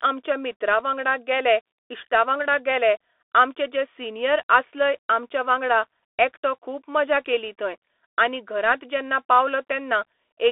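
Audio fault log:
Throughout, Bluetooth CVSD headset codec: the speech has the narrowband, boxy sound of a headset link. Its line band runs roughly 300 Hz to 3.5 kHz and nothing passes above 3.8 kHz. CVSD sends one up-or-down bit per sample and adapts its step size, and here the damage is plainly audible. The s sounds turn scratchy, loud high peaks smear as the step falls behind them, and a grainy hiss sits beneath the speech. On a spectrogram the energy stops in a sharp flat ceiling near 3.8 kHz, with a speckled noise floor below it. The waveform shows slope-limited, stair-stepped edges on fast transients.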